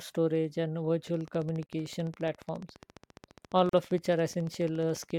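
From 1.07 s right through to 5.11 s there's a train of clicks, a steady tick about 14 times a second, some fifty in all, peaking at roughly the level of the speech itself and audible between phrases too. It's likely interference from nearby gear or a faulty connection or power supply. Over the top, at 1.66 s and 3.69 s, exactly two seconds apart, you get a gap at a join of encoded pieces: silences of about 31 ms and 40 ms with smeared edges, left by encoder start delay and end padding that weren't trimmed when separately encoded chunks were spliced.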